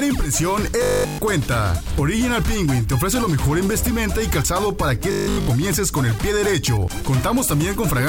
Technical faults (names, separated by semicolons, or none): robotic sound from repeated short buffers